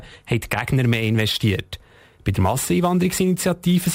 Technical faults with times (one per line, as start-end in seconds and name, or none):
0.66-3.94 sample clock jitter